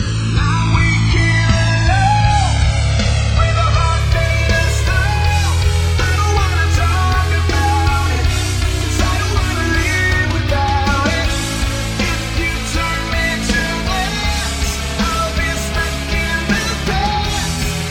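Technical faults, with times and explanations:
Throughout: channels drifting apart. The two channels behave as if captured on devices running from separate clocks that disagree by a few hundred parts per million, so the timing offset between them slowly grows, reaching about 5 ms by the end. When the channels are summed to mono, that changing delay produces comb-filter notches that glide steadily through the spectrum, which is heard as a slow, continuous flanging sweep on the sound.
0 to 4.0 s: adaptive stream starting at a low bitrate. Playback opens on a reduced-quality version of the stream, which fits AAC-LC at roughly 24 kbit/s. The player picks it to start quickly, before it has measured the connection. Nothing is present above 9.7 kHz, so the top end sounds dull, and coding artefacts are more prominent. At 4.0 s the player switches to a better version, consistent with about 96 kbit/s, and the treble and clarity return abruptly with no gap.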